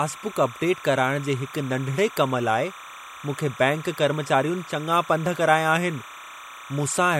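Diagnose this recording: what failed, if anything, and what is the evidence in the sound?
Timecode bleed, from the analogue wiring. A steady chirping warble sits behind the speech throughout, about 20 dB down. It switches between tones near 1 kHz and 2 kHz at a 29.97-frame rhythm. Linear timecode is leaking in from a neighbouring cable or track.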